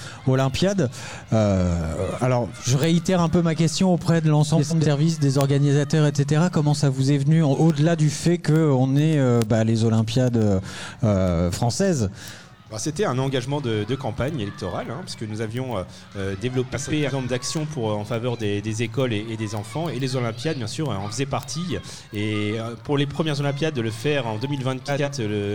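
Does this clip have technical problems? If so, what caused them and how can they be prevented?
Yes. Two faults are present.

Word clock ticks run from 0.12 s to 25.44 s: sharp ticks of uneven strength, roughly every 0.15 s, around 200 in all. The receiving device was running on its own clock, about 150 ppm off the sender's, so each time the two clocks slipped past each other one sample was dropped or repeated. Random digital clicks land at irregular times, but these arrive at a steady rate. Locking the receiver to the sender's word clock, or inserting a sample rate converter, prevents this.

Frames out of order occurs at 4.57–4.86 s, 16.73–17.11 s and 24.88–25.09 s. In each stretch, two neighbouring runs of frames were decoded in the wrong order, so the halves play swapped. The swapped blocks are about 128 ms, 171 ms and 85 ms long respectively. Each stretch produces a garbled flutter. 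Unlike a dropout or skip, no time is lost because all the audio is present but rearranged. Reordering packets by sequence number before decoding prevents this.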